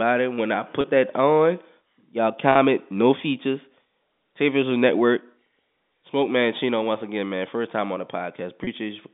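At 0.81 s, 2.52 s and 8.64 s, the speech briefly turns into a held, slightly buzzy tone for about 30 ms. This is packet loss with pitch repetition. Each gap fits a single lost packet, which the receiver filled by repeating the last pitch period. Unlike a plain dropout or click, nothing goes silent. The sound sustains unnaturally for an instant and then rejoins the speech, all within the narrow 200 Hz to 3.6 kHz G.711 telephone band.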